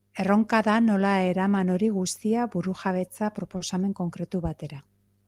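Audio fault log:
3.57–3.62 s, short stall from a late packet: a speech packet arrived late and the jitter buffer ran dry, so the receiver held the last sound for about 30 ms before resuming where it left off. Nothing is lost, but that instant lingers with a slight buzz or dip, and everything afterwards plays 30 ms later.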